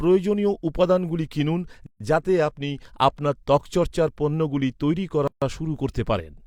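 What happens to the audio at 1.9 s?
Separately encoded pieces of the speech were joined without trimming the encoder's start delay and end padding, leaving a gap at a join of encoded pieces. From 1.87 to 2.00 s, a gap of about 139 ms cuts in with smeared edges before the speech resumes where it stopped.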